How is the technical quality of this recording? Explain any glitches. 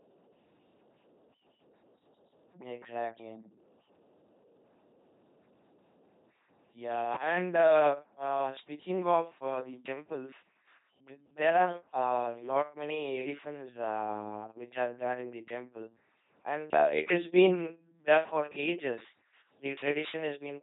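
Pretty rough. The whole thing has been through an LPC-10 vocoder, so from start to finish the speech comes out as a buzzy, mechanical robot voice with nothing above about 3.9 kHz. The codec runs at just 2.4 kbit/s. Rather than sending the waveform, it models the vocal tract with a small all-pole filter and excites it with either a pulse train or noise. Every frame is forced to be fully voiced or fully unvoiced, which produces the buzz, plus odd hiss wherever that call goes wrong.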